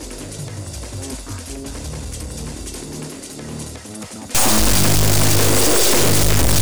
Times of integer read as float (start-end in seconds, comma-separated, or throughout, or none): 4.35-6.62